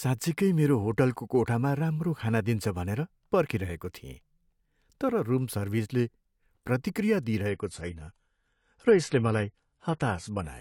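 At 7.49 s the speech abruptly loses its top end, with nothing above about 11.5 kHz, and grows smeary codec artefacts until the end. This is an adaptive stream at a lower bitrate, consistent with a drop from 96 to 32 kbit/s AAC. The lack of any gap sets it apart from a rebuffering stall.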